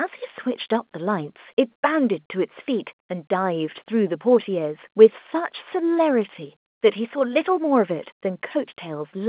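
A speech recording with no technical faults to report. It carries the band-limit of mu-law telephone coding at 8 kHz sampling, so nothing above 4 kHz reaches the ear, and a faint quantisation hiss rides along with the level.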